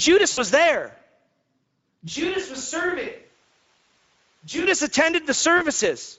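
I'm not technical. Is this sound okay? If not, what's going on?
No. The whole recording went through the Speex codec, an older internet-calling compression scheme that squeezes speech into very little data. At the setting used here, the speech sounds noticeably rough and hoarse from start to finish.

There are also three moments of VoIP packet loss concealed by the speech codec: bits of the call never arrived, and the receiving end guessed at the missing sound. At 0.31 to 0.44 s, 2.89 to 2.96 s and 5.57 to 5.64 s, the voice smears into a brief buzzy or fuzzy fade, sounding weak for a moment afterwards.

From 2.10 to 4.65 s the sound suddenly turns distant, hollow and roomy, noticeably quieter and thinner, with more background hiss, then snaps back. This points to a switch to a distant microphone, likely because the close microphone dropped out and a farther one took over.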